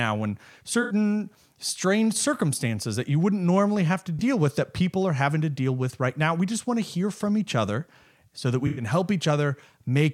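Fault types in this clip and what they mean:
AAC frame loss with concealment: chunks of the coded stream dropped out, and the decoder covered the gaps by reusing the last good spectrum, so you hear brief smeared, noisy patches. It happens three times: 0.82 to 0.93 s, a quick blip at 4.19 to 4.21 s between "wouldn't normally have to" and "with that people are", and the longest at 8.67 to 8.83 s just after "each other so that". The 21 ms blip fits one lost frame, and the others fit runs of about four and five.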